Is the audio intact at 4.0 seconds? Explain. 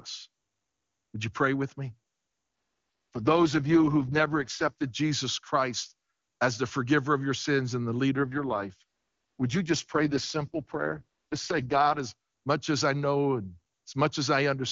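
No. At 4.0 seconds the speech is inside an AMR rate drop running from 3.12 to 4.84 s. The codec falls to a much lower rate, which fits the lowest AMR-WB modes near 6.6 kbit/s. The bandwidth holds and nothing cuts out, but the voice turns rough, raspy and synthetic.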